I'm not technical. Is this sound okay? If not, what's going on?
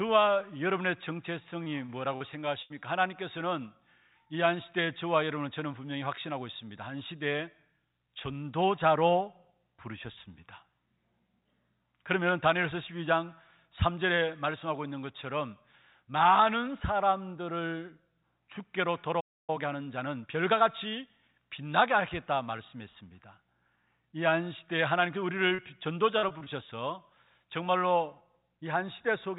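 No. Near the start, at 1.64, 1.86 and 2.16 seconds, and again at 25.49 and 25.55 seconds, the speech briefly smears or wobbles for a split second, and a small sound can slip away. These are short concealed packet losses. Tiny pieces of the call, each about 20 to 40 thousandths of a second long, arrived too late, so the receiving end patched each hole by stretching the sound just before it.

Right after, from 2.62 to 2.72 seconds, a longer hole of about 0.08 seconds turns into a held buzz or a fading hiss, and then the speech picks up further along with that bit missing. This is a burst of packet loss. Several pieces in a row went missing, so the receiver kept extending the last sound and let it fade out until real audio came back.

At 19.20 seconds the sound cuts out completely for about 0.28 seconds and then carries on. This is a playback stall. The player stopped producing sound for that moment, most likely because it ran out of incoming audio or was briefly held up, and it stayed silent until it recovered.

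Straight after the gap, from 19.50 to 21.34 seconds, the speech sounds hurried, about 1.15 times normal speed, with no change in pitch. This is a time-compressed catch-up. To make up for the delay, the player snipped out small slivers and blended the pieces back together, so it could get back to live timing.

From 26.18 to 26.48 seconds the speech turns choppy, with pieces missing. This is repeated packet loss, with four holes close together in under a third of a second and about a third of that stretch patched over. Each patch had barely finished before the next hole came along.

Throughout the clip, the sound also has the narrow, muffled quality of an ordinary phone line, because the call system carries nothing above about 4 kHz.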